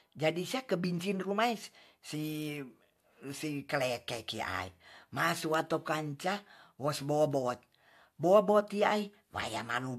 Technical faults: none

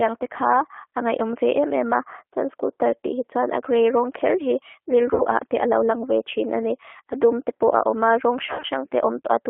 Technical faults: G.729 codec; VoIP packet loss concealed by the speech codec

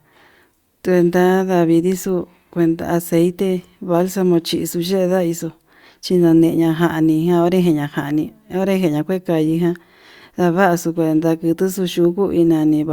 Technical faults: none

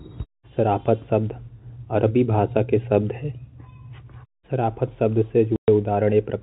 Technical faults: packet loss filled with silence

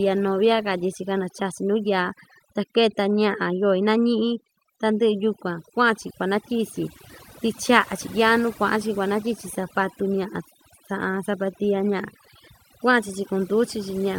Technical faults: overdone noise removal

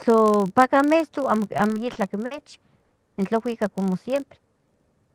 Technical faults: filter restarted on every block; repeated stalls (stutter)

